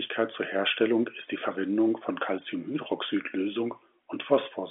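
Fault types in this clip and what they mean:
No faults found; the speech carries the band of a G.711 mu-law telephone line, roughly 250 Hz to 3.4 kHz, with nothing above 3.6 kHz.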